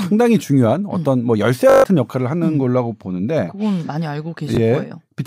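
Lost packets cause Bluetooth stutter at 1.70–1.84 s and 4.55–4.57 s. The receiver loops its last slice, giving a 142 ms buzz, then a brief hiccup.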